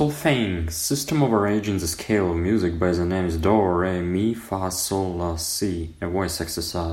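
No dropouts, distortion, noise bursts or timing glitches can be heard anywhere in this speech recording.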